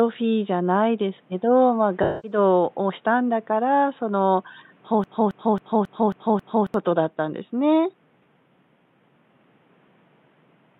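Speech recording with two faults. From 2.02 to 2.37 s there is AAC frame loss with concealment. About 0.21 s of audio, which fits roughly five lost frames, is replaced by a smeared, noisy patch that the decoder rebuilt from the last good spectrum. On a spectrogram it shows as a blurred, grainy block where the harmonic lines lose their clean structure. From 5.04 to 6.74 s a broken-record loop plays one 0.27 s fragment six times back to back, most likely because a stalled player or stream kept resending its last fragment. The audio that belonged in that stretch is lost. On the waveform this appears as identical envelopes repeated in a row, and on the spectrogram as the same stamped pattern laid out again and again. Low room noise, about 39 dB below the speech, runs underneath throughout.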